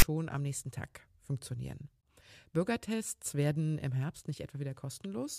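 At 0 to 0.02 s, a block of text tags is decoded as samples: file tags played as audio, heard as a hard-edged, lopsided rasp just before "am nächsten".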